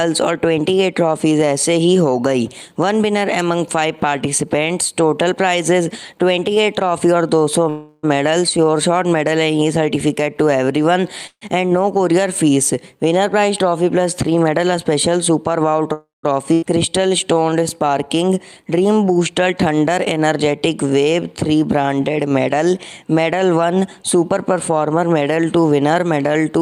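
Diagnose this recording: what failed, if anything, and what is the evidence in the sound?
Call audio freeze, at the network and jitter-buffer stage. At 7.69–8.05 s, 11.27–11.43 s and 15.93–16.25 s the last sound is drawn out into a fading buzz. At 11.27 s it decays to about 70 ms of silence, and at 15.93 s to about 160 ms. Each time the audio resumes exactly where it stopped, with nothing lost, which separates it from a skip. This is likely packets held up in transit, with the buffer running dry and the receiver extending the last sound.

Jitter buffer speed-up, at the buffer stage. From 14.59 to 15.92 s and from 24.02 to 25.91 s the sound runs about 6% fast while its pitch stays put, so it sounds hurried rather than shifted upward. Short pitch-period pieces are trimmed repeatedly to cut excess delay, around a tenth of a second in the first stretch and a little more in the second. A steady gradual rush with no gap or jump distinguishes it from a skip ahead.

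Skip ahead, at the network or buffer-overflow stage. At 16.53–16.64 s playback jumps forward. The join is bridged by under a tenth of a second of fill, and roughly 0.4 s of material is gone. The two sides abut almost directly. Unlike the freeze just before it, time is lost here rather than added, since audio was dropped while later packets were already waiting, pulling delay back down.

Jitter buffer slow-down, at the buffer stage. Immediately after the skip, from 16.75 to 17.65 s, the sound plays about 8% slow at unchanged pitch, with drawn-out sounds. Single pitch periods are repeated to add 82 ms and rebuild the reserve after the jump. The pitch holding steady separates this from a clock or sample-rate error, and the spread-out stretching separates it from the single held tail of a freeze.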